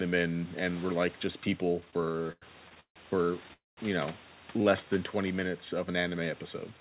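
Speech over a call path, with room noise sitting about 22 dB below the voice and nothing above 4 kHz, which fits a narrowband codec such as G.711. From 1.8 to 2.99 s the audio shows repeated stalls (stutter). Twelve times the jitter buffer ran dry because packets came late, and the receiver stretched the last sound to bridge each wait. These fills total 394 ms, about a third of that span, and the longest is 156 ms, so the passage drags and stutters while nothing is lost. From 3.53 to 3.80 s a call audio freeze holds the sound as a fading continuation that drops to 170 ms of silence before resuming where it stopped. This inserts 238 ms without losing content and is likely caused by packets held up in transit. From 4.52 to 4.94 s a jitter buffer slow-down repeats single pitch periods to rebuild reserve, adding 68 ms. The speech plays at 86% speed with unchanged pitch and drawn-out sounds.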